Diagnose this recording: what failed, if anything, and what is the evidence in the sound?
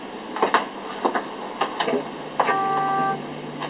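Nothing has failed: the signal carries the ordinary narrowband character of a call path, with the bass trimmed by the microphone's high-pass filter and no content above 4 kHz, which fits G.711 A-law coding at 64 kbps.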